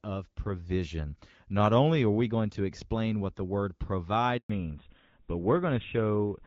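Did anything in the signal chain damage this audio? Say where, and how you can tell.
Yes. At the network stage there is a handover gap: right after "explain what the word" the sound stops from 4.38 to 4.50 s, about 120 ms. On the waveform the envelope collapses to a flat line within a few tens of milliseconds; the spectrogram shows a clean vertical blank across all frequencies. No speech frames arrived while the call moved between networks, so that stretch of speech is simply missing rather than masked by noise.

The codec stage shows a fallback to narrowband from 4.50 s to the end. Before the gap, energy reaches toward 7 kHz, consistent with HD Voice (AMR-WB, which the sound suggests was running near 12.65 kbit/s with only light coding roughness). Afterwards the spectrogram is cut by a hard ceiling at 4 kHz with nothing above it, and the speech sounds duller and rougher, which points to a switch to an older codec such as GSM full rate.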